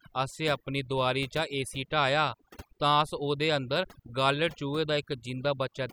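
From start to end the speech carries overdone noise removal: bands near the noise floor are cut away, leaving twinkling specks in near silence, not steady hiss or broadband dulling.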